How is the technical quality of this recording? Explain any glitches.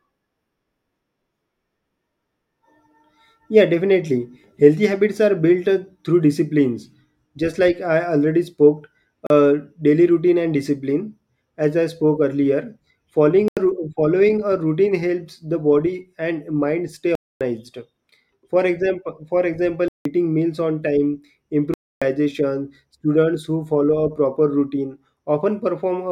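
The speech is interrupted five times by blocks of digital silence: hard dropouts at 9.27 s (36 ms, just before "daily routine and discipline"), 13.48 s (85 ms), 17.15 s (256 ms), 19.88 s (171 ms, between "example for" and "meals on time") and 21.74 s (278 ms, right after "meals on time"). Each cuts abruptly to dead silence. The shortest sounds like a short hole, and the longer ones sound like audible holes. Samples were most likely zeroed because the output buffer wasn't filled in time, and the 85 ms and 171 ms gaps fit blocks of 4096 and 8192 samples.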